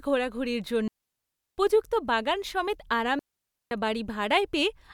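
A speech clip with two digital wireless dropouts. The first runs from 0.88 to 1.58 s, about 0.70 s long. The second runs from 3.19 to 3.71 s, about 0.52 s. Each time, the receiver loses too much of the link and mutes with a very fast fade. The result is a clean gap of near silence, with no noise burst at either edge.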